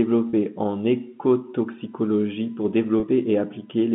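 At 0.30 s a single packet went missing, and the receiver bridged the 30 ms gap with packet loss with pitch repetition, re-playing the last pitch period of the speech. The dropout becomes a brief held, faintly buzzy tone.

From 1.79 to 3.79 s, current drawn by a USB bus in 1 ms frames leaks into the audio through power or ground. The result is USB whine: a steady tone built on 1 kHz, loudest at its 15 kHz harmonic, roughly 40 dB under the speech.

At 3.00 s, still under the whine, another packet is lost and the 30 ms gap is again filled by repeating the last pitch period. It gives the same short held buzz, sitting in audio carried through G.711 A-law telephone coding.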